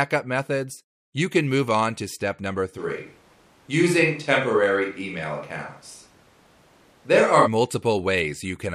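At 2.80 s, right after "on to step number", the speech abruptly turns roomy and hollow, with thinner bass, faint background noise and little level change, until it snaps back at 7.45 s. This is likely a switch to a distant microphone after the close microphone dropped out.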